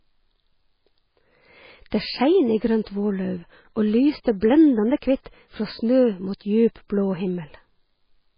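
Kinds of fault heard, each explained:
MP3 compression: The speech sounds watery and swirly throughout, with nothing above 5.1 kHz, likely from heavy MP3 encoding at a very low bitrate around 16 kbps. A spectrogram shows a flat ceiling at 5.1 kHz and speckled gaps where weak components blink on and off.
Pre-echo: Twice, at 4.24 s and 4.41 s, a brief hiss of about 16 ms leaks in just ahead of a sharp attack, softening it. On the waveform a noise smear precedes each onset; on a spectrogram, broadband haze appears before the transient.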